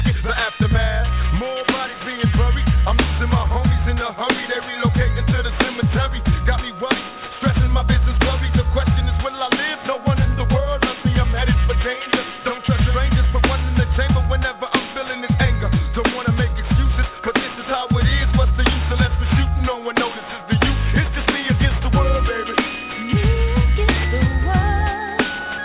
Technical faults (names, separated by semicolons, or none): aliasing